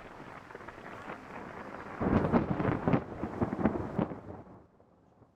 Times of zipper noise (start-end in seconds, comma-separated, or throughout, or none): 3.90-4.74